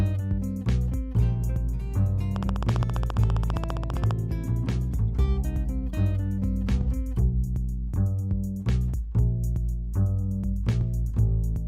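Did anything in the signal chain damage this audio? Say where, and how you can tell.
Yes. From 2.36 s to 4.12 s a train of clicks ticks over the audio at a steady 14.9 clicks per second, about thirty similar pops, each peaking roughly 10 dB above the surrounding sound and continuing through quiet moments. Their uniform shape and even spacing show they come from outside the recorded material. The likely stage is the analogue wiring or the interface, where nearby equipment or a struggling device can inject a repeating pulse.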